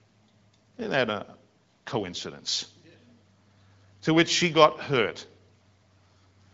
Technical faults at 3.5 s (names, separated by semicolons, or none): none